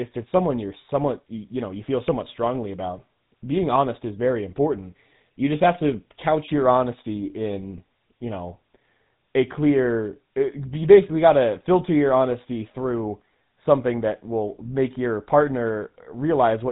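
From start to finish the speech sounds buzzy and gravelly, with a plainly audible roughness and nothing above about 3.9 kHz. This is the GSM full-rate codec at work: it rebuilds the voice from a vocal-tract model driven by coarse, evenly spaced pulses, which fits its 13 kbps rate.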